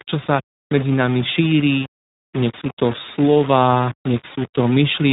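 From the first moment to the end, the speech carries a coarse, grainy distortion that tracks the signal rather than sitting under it as a steady hiss. Quiet stretches and decaying syllables turn gritty and break up between a few steps. The error sits at roughly 15 dB below the signal. The likely cause is low bit depth without dither: the samples were rounded to very few levels, which fits about a 5-bit signal.

Across the whole clip the audio also shows plainly audible iLBC codec damage. The band stops at 3.8 kHz, so sibilants and upper harmonics are missing and the speech sounds boxed-in. The codec builds each 20 ms frame's excitation independently of the previous one, which gives the speech a rough, slightly synthetic buzz. The sound points to the 15.2 kbps mode with 20 ms frames, and the coding roughness layers onto the quantisation grit.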